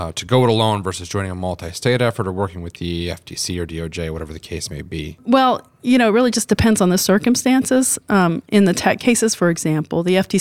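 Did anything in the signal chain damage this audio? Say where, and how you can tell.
No, nothing in the signal chain can be heard to have damaged this speech recording, and the signal reaches the listener intact at every stage from capture to playback.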